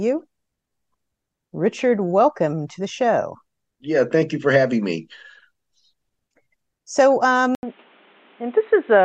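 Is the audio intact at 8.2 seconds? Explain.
No, 8.2 seconds falls inside a stretch from 7.55 s to the end of the clip where the speech turns dull and boxy. Right at 7.55 s there's a gap of about 80 ms, then the sound comes back with nothing above 3.9 kHz and a new noise floor sitting roughly 35 dB under the speech, at much the same loudness as before. That's most likely the input switched to a poorer device, one with a narrower band and its own background noise.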